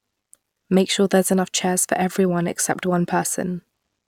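No technical faults can be heard in this recording.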